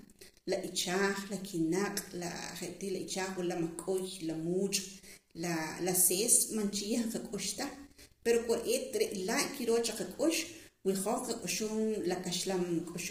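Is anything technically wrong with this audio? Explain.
Yes. Throughout the speech, the voice sounds rough and grainy, with noise filling the gaps between harmonics and a thin, synthetic top band. This is likely low-delay AAC compression: AAC-ELD's short frames resolve pitch harmonics poorly, and the heavy damage points to roughly 24 kbps.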